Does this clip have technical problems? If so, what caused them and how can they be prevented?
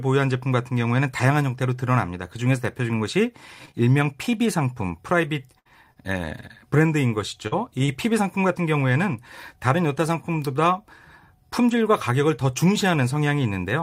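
Yes. Three kinds of packet-loss fault affect this speech clip.

Scattered short gaps run from 3.65 to 6.41 s: about four separate holes, the longest around 70 ms, about 120 ms missing in total and roughly 4% of that stretch concealed. The receiver bridged each hole by extending the preceding sound, so the audio is mostly clear between them but carries brief ticks, smears and hiccups. A larger jitter buffer and a more stable network path would prevent most of these.

Short concealed packet loss occurs at 7.47–7.54 s (40 ms missing, 42 ms filled) and 7.86–7.90 s (20 ms missing, 21 ms filled). In each case the decoder continued the last sound, following its pitch where voiced or substituting shaped noise where not, then crossfaded back into the received audio. The result is a short smear or wobble, and a brief consonant can drop out. Reducing loss on the link, for example by moving from congested Wi-Fi to a wired connection, would prevent it.

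A lost packet rebuilt from error correction appears at 7.52–7.54, 7.88–7.90 and 8.10–8.12 s, 20 ms each. Each lost packet was recovered from the low-bitrate copy carried in the following packet (Opus in-band forward error correction). There is no gap, but those frames sound rougher and noisier than the surrounding audio. Raising the encoder bitrate and lowering the underlying loss rate would make these substitutions rarer and cleaner.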